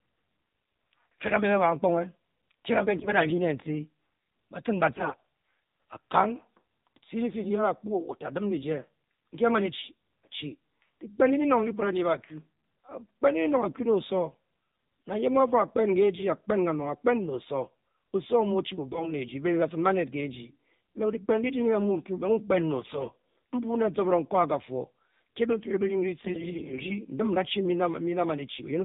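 AMR narrowband mobile codec damage runs through the whole speech recording. Nothing above 4 kHz survives, and the voice sounds buzzy and synthetic because a pulse-driven vocal-tract model rebuilds it at a low rate, plainly audible and consistent with AMR-NB near 7.4 kbps. AMR bit errors appear at 2.97–3.33 s, 4.96–5.21 s, 18.92–19.11 s, 22.80–23.15 s and 26.18–26.97 s, where the voice keeps roughly its pitch and level but turns hoarse, scratchy and gargly. Flipped low-priority bits misplace the excitation pulses and skew the fine pitch, gain and spectral values. The damage sounds like an error rate of a few percent in the milder bursts and around twice that in the harsher ones.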